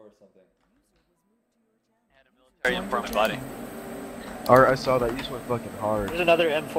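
The audio opens in a dropout to a faint residue that is already under way when the clip starts. Until 2.65 s, the wanted sound is missing. Only a faint leak of it remains, roughly 40 dB below its normal level. At 2.65 s the full signal returns abruptly, with no fade. The likely cause is a break in the signal feed while the path downstream stayed live and kept passing a trace of sound.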